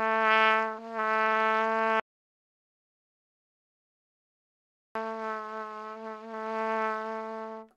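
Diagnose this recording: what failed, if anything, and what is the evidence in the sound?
An audio dropout to silence runs from 2.00 s to 4.95 s, removing about 2.96 s of sound. The signal cuts to silence, with no room tone or noise floor. This sets it apart from a noise gate or fade. The likely cause is a lost input at the capture stage while the recorder kept writing zeros.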